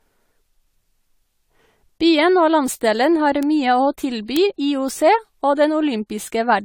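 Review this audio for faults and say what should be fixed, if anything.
Generation loss throughout: the speech was likely decoded and re-encoded with AAC about four times, each pass requantising afresh, so it sounds swirly, hollow and smeared with blurred attacks.

Bit error spikes at 3.43 s and 4.37 s: a flipped bit makes a sample jump by a power of two and snap back, heard as two sharp broadband ticks.

To prevent both, keep a lossless master through every processing stage, encode only once at the end, and use error-checked storage and transfer.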